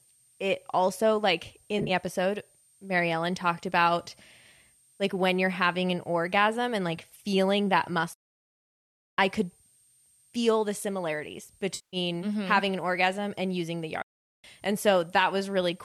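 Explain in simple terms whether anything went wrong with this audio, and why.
Three separate problems affect this speech recording.

A switching supply whistle runs through the whole clip. A power supply in the recording chain is switching at a rate high enough to be heard, and its electrical noise leaks into the audio. The result is a faint, thin, high whistle sitting between about 8.6 and 8.8 kHz, slightly unsteady in pitch. It stays under the speech from start to finish.

AAC frame loss with concealment happens three times. Small chunks of the compressed audio never reached the decoder, so the decoder guessed to fill the gaps, reusing the tone of the last good chunk. Between 1.79 and 1.91 s, about 60 ms of audio went missing in short bursts spread over roughly a tenth of a second, which sounds like a brief garbled flutter. At 6.97 s a single 10 ms gap causes a tiny blip. From 11.75 to 11.97 s the decoder had to fill 180 ms, long enough to hear a smeared, hollow, noisy stretch.

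A playback stall happens twice. The player ran short of audio to play, most likely because data arrived late or the playback process was briefly held up, so it went silent until it caught up. The sound cuts off mid-flow from 8.13 to 9.18 s, just over a second, and again from 14.02 to 14.44 s, about 0.4 s.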